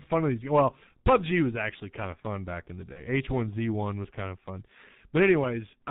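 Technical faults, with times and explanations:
Throughout, G.723.1 codec: the speech has been squeezed through an old internet-telephony codec at a rate that fits 6.3 kbit/s. Everything above 4 kHz is gone and the voice model updates slowly, so it's muffled and hoarse, with smeared consonants and heavy damage overall.
2.93 to 3.04 s, VoIP packet loss concealed by the speech codec: right after "fun back in the", one 30 ms frame goes missing. The decoder fills the hole by stretching its last pitch and filter at falling gain, giving a brief buzzy or noisy smear that fades, and the voice stays weak or distorted for a short while afterwards.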